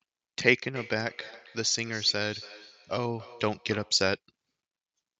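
Feedback echo between two devices, 0.75 to 4.07 s: another device replays the speech into the microphone, so it returns roughly every third of a second, about 18 dB down.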